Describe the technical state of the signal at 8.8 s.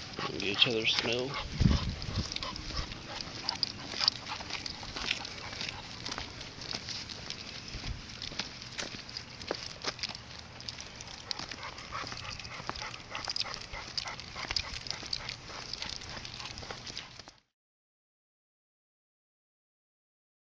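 At 8.8 s the signal is intact, with no dropout, distortion, click or other fault to be heard at that point.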